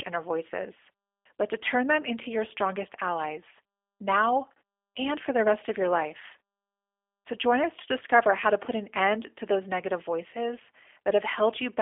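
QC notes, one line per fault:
Throughout, G.729 codec: the speech has been squeezed through a low-bitrate VoIP coder, and its damage is plainly audible as a rough, slightly synthetic texture. Each short frame is rebuilt from a vocal tract filter, a pitch predictor and a few pulses, so fine detail is lost. The telephone line band runs from about 300 Hz to 3.5 kHz. On a spectrogram there is nothing above about 3.7 kHz, leaving a hard empty ceiling.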